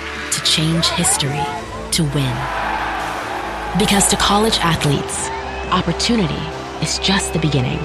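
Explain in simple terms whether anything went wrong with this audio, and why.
Something does go wrong, starting at about 4.93 s and running to the end: channel delay, which causes comb filtering. One side of the stereo arrives a tiny bit late, only a couple of samples, around 0.05 ms. When the two sides get mixed to mono, parts of the sound cancel out at regular spacings, with the first gap up around 10 kHz. So that last stretch loses its airy top end and sounds a bit dull.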